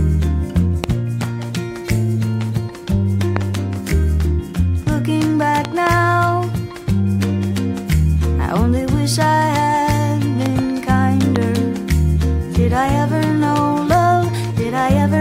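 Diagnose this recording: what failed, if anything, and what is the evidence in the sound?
A likely intermittent electrical fault in the analogue wiring, such as a loose plug, a switch contact or a static discharge, is injecting sudden voltage steps into the signal. Each step reaches the recording as a loud pop about 15 dB above the surrounding audio, which keeps running underneath. Single pops land at 0.84 s, 3.37 s and 11.36 s, and double pops in quick succession span 5.65 to 5.89 s and 10.46 to 10.61 s.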